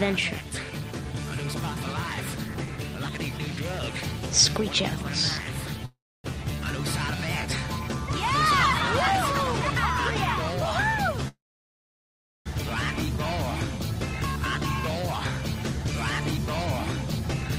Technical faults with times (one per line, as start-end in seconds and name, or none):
5.85-6.26 call audio freeze
11.28-12.48 call audio freeze